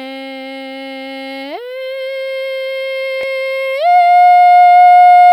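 Nothing goes wrong anywhere in this bit of music, so there's no technical fault to point to.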